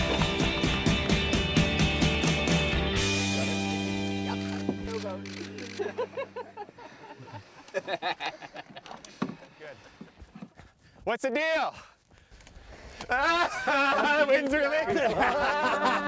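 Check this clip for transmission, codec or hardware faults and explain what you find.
Nothing stood out on listening.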